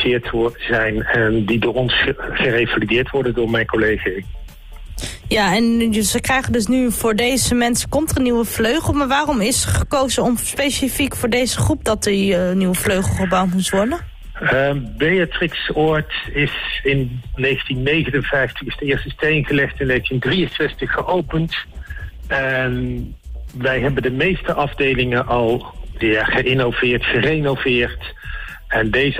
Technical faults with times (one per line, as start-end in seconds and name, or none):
20.11-24.25 call bitrate drop